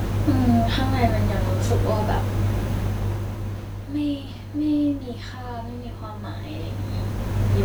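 Nothing technical goes wrong anywhere in this bit of speech, so there's nothing here to pick out.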